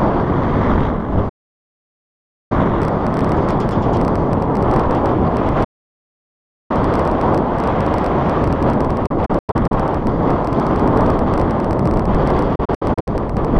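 The audio suffers digital broadcast dropouts. At 1.29 s it fades out within about 8 ms and stays silent until 2.52 s. A second gap runs from 5.64 to 6.71 s. From 9.06 to 9.72 s and from 12.55 to 13.08 s it breaks into several short holes, the longest about 96 ms and 64 ms. The receiver muted on lost or corrupt frames. That material is gone. A train of clicks starts at 2.82 s and runs to 13.46 s. It has around 150 similar pops, about 14 per second, at an uneven pace. They are roughly as loud as the sound and tick through the silences too. Interference from nearby equipment is the likely cause.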